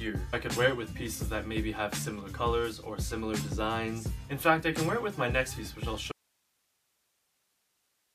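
At 6.12 s the audio cuts out abruptly and never returns, leaving only a faint hiss sitting far below the earlier level through to the end. This is an audio dropout to a faint residue, likely a lost signal feed while the downstream path stayed live.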